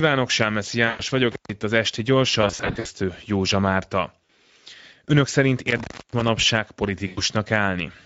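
Throughout, the speech has a grainy, hoarse edge, with a plainly audible rasp riding on every syllable. That texture is Speex codec damage: this CELP coder is working at a rate that fits a Speex setting around 16.8 kbps, leaving too few bits to describe the excitation cleanly, so its synthetic pulse-and-noise excitation shows through as roughness.

At 0.87 to 1.03 s the sound smears into a fading buzzy tone or coloured noise for about 120 ms. This is VoIP packet loss concealed by the speech codec: with packets missing, the decoder kept repeating its last pitch and filter at falling gain, and the voice stays thin briefly after real data returns.

From 1.32 to 1.50 s the audio drops out with a crackle at each edge, the line open for about 133 ms and only faint hiss underneath. That is an intermittent contact, a loose plug or cable breaking the connection for a moment.

Between 2.41 and 2.87 s the concealment returns as a run of short smeared patches scattered over 440 ms, about 240 ms lost in total with the longest gap 60 ms. 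Each patch leaves the sound weak as the decoder recovers. A brief 40 ms smear follows at 4.26 s.

At 5.68 to 6.28 s a second contact fault cuts the sound for about 291 ms, again crackling at the breaks with hiss in between.

Finally, at 7.07 to 7.21 s, about 100 ms of loss is bridged by the same fading extrapolation.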